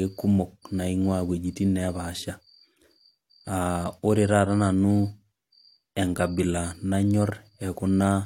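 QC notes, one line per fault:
No faults found in the speech. Nothing here calls for a time or range entry.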